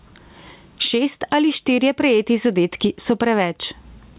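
Speech with gain pumping throughout, a level swing of about 20 dB. The likely cause is input gain set far too high, with a fast limiter clamping each peak. A waveform shows flattened, even-height peaks. The spectrogram is also empty above 4 kHz from the call path, which fits G.711 narrowband coding.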